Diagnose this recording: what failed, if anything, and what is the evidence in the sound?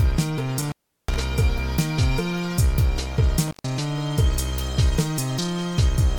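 Intermittent contact in the analogue wiring, at 0.58 to 1.22 s and again at 3.47 to 3.64 s. A loose cable or plug briefly loses connection, so the sound drops out for about 0.36 s and then 0.13 s, with crackle as the contact breaks and remakes.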